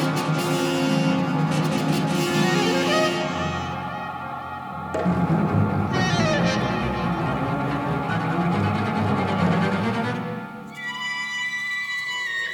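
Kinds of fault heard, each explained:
No technical fault can be heard anywhere in the audio. There is nothing here that calls for an explanation.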